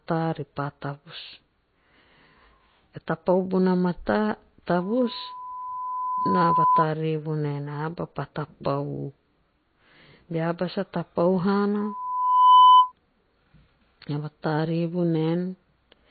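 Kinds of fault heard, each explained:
MP3 compression: Throughout, the speech sounds watery and swirly, with smeared attacks and nothing above 4.5 kHz. That codec damage is plainly audible and most likely comes from low-bitrate MP3 encoding, around 24 kbps, zeroing weak frequency lines and cutting treble.
Loudspeaker feedback squeal: A 1 kHz tone swells into a squeal twice, from 4.79 to 6.86 s, building over about two seconds to roughly 5 dB above the speech, then from 11.79 to 12.92 s, rising faster to roughly 15 dB above. A microphone picking up its own loudspeaker caused it.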